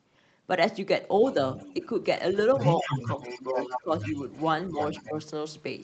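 From 1.25 to 1.86 s, a faint second voice about 20 dB below the talker, likely the other side's voice leaking through an incompletely cancelled loudspeaker echo, adds thin, separate harmonic traces on a spectrogram. From 2.31 to 5.12 s that leak returns only about 5 dB down, clearly audible. Between 2.83 and 4.14 s, speech suppressed in double talk, likely from the canceller turning both voices down, dips the talker by up to about 10 dB for roughly half a second in total, visible as notches in the waveform envelope. At 5.09 to 5.15 s a brief dip of about 5 dB appears.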